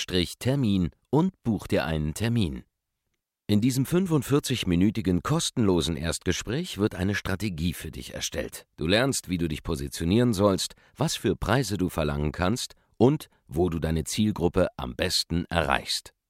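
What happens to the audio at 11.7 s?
At 11.7 s the speech carries on without interruption, and no dropout, click, distortion or other fault can be heard at that point.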